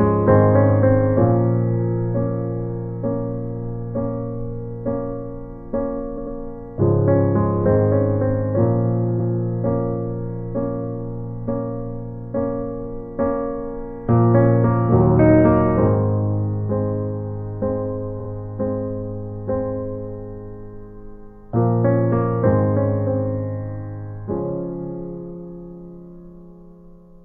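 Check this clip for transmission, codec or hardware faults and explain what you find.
Repeated frames occur at 6.13 to 6.32 s, 9.15 to 9.29 s and 18.16 to 18.26 s. A short block of compressed audio was delivered more than once, so the decoder replays the same slice. At 6.13 s a 93 ms block plays two extra times. At 9.15 s a 139 ms block repeats once. At 18.16 s a 46 ms block plays two extra times. Each is heard as a brief stutter, and together they add about 0.42 s to the clip.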